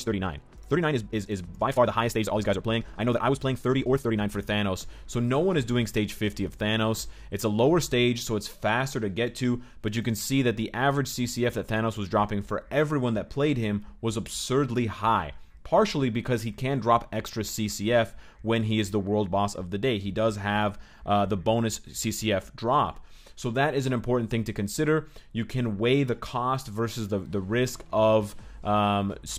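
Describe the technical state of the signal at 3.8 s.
At 3.8 s the signal sits inside a time-stretched section running from 0.0 to 4.32 s, where the audio plays about 1.57 times faster than the surrounding material while its pitch stays unchanged. The likely cause is software compressing the passage to fit a shorter length, dropping short slices to preserve pitch. The result sounds rushed, and the pace snaps back to normal abruptly at 4.32 s.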